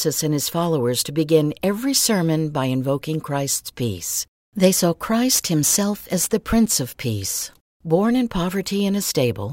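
Nothing in the speech stood out as a technical problem on listening.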